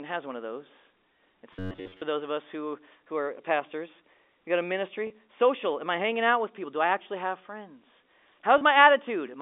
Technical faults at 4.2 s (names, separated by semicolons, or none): none